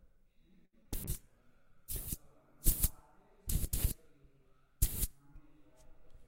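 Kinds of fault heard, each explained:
Short stall from a late packet: at 0.65 s a packet arrived late, so the receiver stretched the last sound for 74 ms until it came. Nothing is lost, but playback runs 74 ms later afterwards. A spectrogram shows the pattern frozen into flat horizontal streaks.
Short concealed packet loss: at 0.83 s and 0.87 s, two back-to-back 20 ms chunks never reached the decoder in time and were patched by continuing the preceding sound, giving a brief smear. The waveform shows a smoothed, repetitive stretch and the spectrogram a blurred patch.
Call bitrate drop: from 1.05 s to 6.12 s the encoder was pushed from 128 to 17 kbps, sitting at its lowest for about 1.2 s, so the sound turns coarse and muffled. A spectrogram shows thinned high frequencies and blotchy, smeared texture throughout that stretch.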